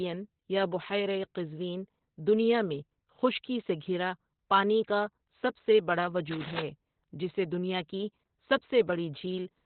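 Opus voice compression runs throughout the speech. Narrowband SILK coding removes everything above 4.2 kHz, likely at 8 kbps, leaving speech muffled, hoarse and slightly robotic.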